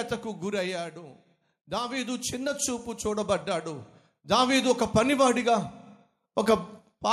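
From 0.05 to 1.05 s there is automatic gain falling: the gain control judges the speech too loud and pulls level down by about 5 dB, so voice and background sink together. From 1.65 to 4.75 s automatic gain rising follows, as the control decides the input is too quiet and lifts gain by about 10 dB, making speech and background swell slowly together.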